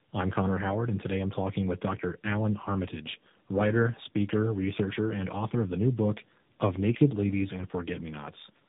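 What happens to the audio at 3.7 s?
The speech passed through two low-rate speech codecs in a row, likely G.729A and then AMR-NB, in tandem speech coding throughout. At 3.7 s it sounds rough, muffled and warbly, with nothing above 3.8 kHz.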